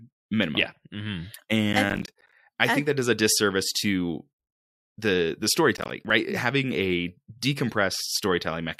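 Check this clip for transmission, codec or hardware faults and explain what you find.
Processor overload crackle occurs twice in this speech clip, from 1.73 to 2.34 s, just before "I I think that", and from 5.77 to 6.10 s, between "the the" and "having a". The processor is falling behind and missing buffer deadlines in quick succession, roughly twenty in the first burst and about ten in the second. The pattern fits buffers of around 10 ms. Each missed buffer drops to silence with hard edges, so the speech breaks into a gritty, crackling tear that stops once the load eases.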